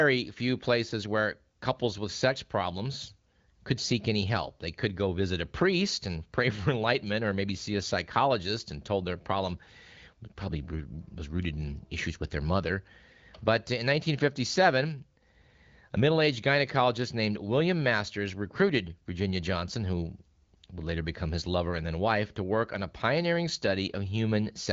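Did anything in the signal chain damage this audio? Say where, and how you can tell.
No, nothing in the chain damaged this speech recording. The audio stops at about 7.4 kHz and carries only a light coding texture, which fits the AMR wideband (HD Voice) codec working as intended at a rate around 15.85 kbit/s.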